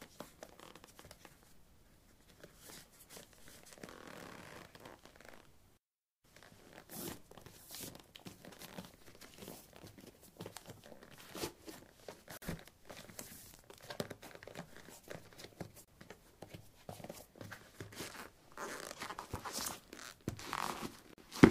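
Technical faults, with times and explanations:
12.37–12.42 s, 15.85–15.88 s and 21.13–21.18 s: gap at a join of encoded pieces. Silences of 47, 30 and 46 ms open in continuous sound, left by encoder start delay and last-frame padding where separately encoded pieces were joined untrimmed. Unlike a dropout, the sound resumes exactly where it stopped, with smeared edges rather than clicks.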